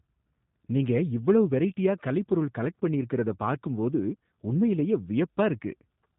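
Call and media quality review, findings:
G.729 codec, throughout: speech rough and synthetic, nothing above 3.8 kHz. Sparse-pulse filter rebuild of each frame, consistent with an 8 kbit/s stream. Damage plainly audible.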